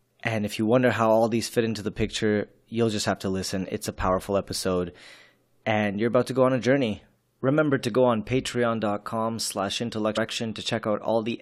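Speech, with a single burst of damaged data in a compressed stream at about 10.16 s, near the end of the clip. For a very short moment the decoder received corrupted bytes that it could not parse as a valid frame, so it lost sync and had to find the next good frame header, leaving a brief glitch in the sound. On a spectrogram this appears as a thin vertical break in the speech harmonics, and on the waveform as an abrupt discontinuity.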